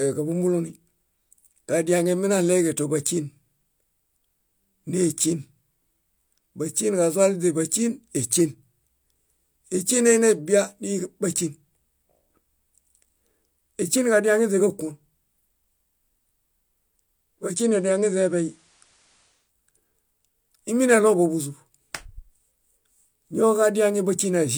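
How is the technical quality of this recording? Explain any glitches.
The recording has one glitch. From 17.38 to 19.52 s, digital radio blends to analogue FM over about 0.3 s. Faint hiss appears, with no level change.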